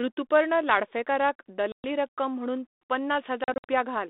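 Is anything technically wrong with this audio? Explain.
Yes. Packet loss on an ADPCM call occurs at 1.72 s, a 120 ms hole between "ऋतुपर्ण लाडफेकार क" and "रक्कम म्हणून". It recurs from 3.44 to 3.71 s as 140 ms of gaps spread over 240 ms, with the longest run 60 ms. Silence fills each hole, which leaves the decoder's adaptive predictor and step size out of step with the sender's. The speech therefore restarts abruptly with brief distortion, then settles within tens of milliseconds. The G.726 path at 32 kbit/s, limited to roughly 250 Hz–3.7 kHz, carries the speech between the holes.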